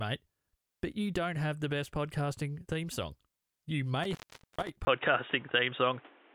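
From 4.03 to 4.70 s an intermittent contact interrupts the speech: the connection opens for about 0.44 s, cutting the signal to faint hiss with crackle at each edge. The waveform collapses to a thin noise band bracketed by sharp spikes, which show as vertical streaks on a spectrogram.

At 4.85 s, after a 20 ms silence, the sound turns dull and boxy through to the end, most likely because the input switched to a poorer device. Nothing remains above 3.8 kHz, so the spectrogram shows a flat ceiling. The level shifts by a few decibels, and a new noise floor sits well below the speech.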